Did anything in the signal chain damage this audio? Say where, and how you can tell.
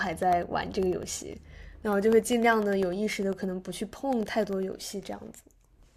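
Yes. From 0.13 s to 5.83 s the speech carries a steady tick every 0.1 s, around fifty in all, audible only while sound is present. These are periodic USB or driver dropouts: something stalls the bus or driver at that interval, blanking roughly half a millisecond with silence.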